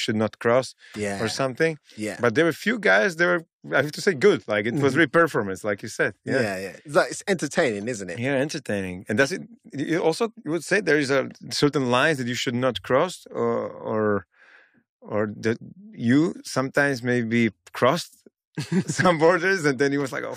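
Nothing in this speech recording stands out as a technical fault at any point, so there's nothing to flag along the way.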